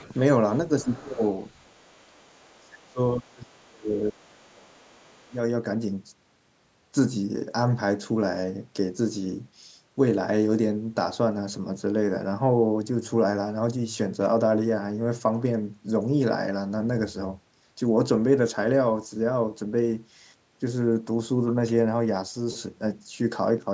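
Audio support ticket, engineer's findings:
Residual echo, other side's voice leaking through: echo canceller likely left part of the far-end loudspeaker signal in the mic path. Faint second voice at 0.0–0.18 s, 0.80–0.85 s, 1.17–2.29 s, 3.97–4.24 s and 4.51–5.34 s, roughly 25 to 35 dB below the talker.

Speech suppressed in double talk: canceller could not tell the near talker from echo while both sides spoke, so it likely attenuated everything. Near-end voice dips at 0.83–1.23 s and 2.31–5.37 s, ducking by roughly 25 to 30 dB at its deepest, overlapping the leak.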